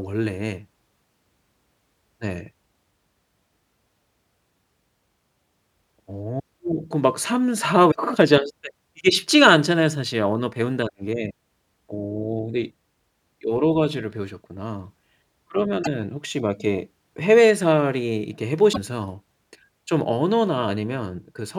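Likely a broken MP3 bit reservoir at 7.90–7.96 s, 15.82–15.87 s and 18.72–18.77 s in this speech recording. Each time, the audio jumps ahead and roughly two 26.1 ms frames decode wrongly. After a cut, those frames reach back for reservoir bytes that now belong to other frames.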